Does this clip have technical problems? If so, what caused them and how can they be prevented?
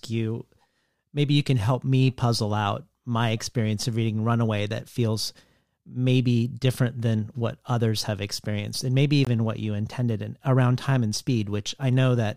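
Yes. At 9.25 to 9.27 s the speech cuts out for about 20 ms, a brief hole in otherwise continuous sound, and then picks up exactly where it stopped. This is a gap at a join of encoded pieces. The audio was encoded in separate sections and spliced back together untrimmed, so the silent start-up delay of one encoder pass and the padded last frame of the other both remain at the seam. To prevent it, encode the material as one continuous file, or trim each section's encoder delay and end padding before joining.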